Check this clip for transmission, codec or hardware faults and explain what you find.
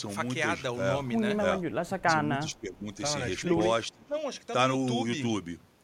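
The speech drops in level three times: 1.86 to 2.07 s (about 15 dB), 2.46 to 2.87 s (about 10 dB) and 3.92 to 4.16 s (about 20 dB). The likely cause is speech suppressed in double talk, where an echo canceller attenuates the near talker while the far side is speaking.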